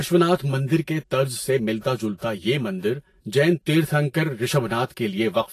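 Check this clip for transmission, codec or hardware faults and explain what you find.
Two faults run through the whole speech recording: comb filtering from a delayed channel, and plainly audible lossy coding damage.

The channel delay (comb filtering) lasts the full length. One channel arrives about 5 ms behind the other, and when the two are summed to mono, the components they share cancel at regularly spaced frequencies. The first notch sits around 100 Hz, with further notches repeating up the spectrum. This fixed comb gives the speech a hollow, phasey colour that does not change with the content.

The coding damage is also present from start to finish and is plainly audible. It is likely Vorbis compression, which fits a low bitrate of around 30 kbps. Nothing is present above 14.2 kHz. Below that cut-off, the upper bands are quantised so coarsely that fine detail is replaced by noise of similar energy. 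The result is a hissy, grainy top end, with roughened tones and smeared consonant attacks.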